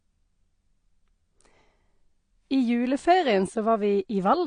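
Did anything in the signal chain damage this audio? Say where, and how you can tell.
Yes. The damage is at the codec stage and runs through the whole speech clip. Nothing is present above about 9.7 kHz, and the top end is dull and smeared. Sibilants sound fizzy, and sustained sounds warble. The likely cause is AAC compression, AAC-LC at a low bitrate that fits about 32 kbps. At that rate the encoder cuts the bandwidth and starves high bands of bits, leaving holes or substitute noise.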